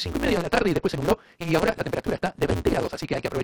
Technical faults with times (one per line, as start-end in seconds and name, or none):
0.00-3.44 block size mismatch (truncated)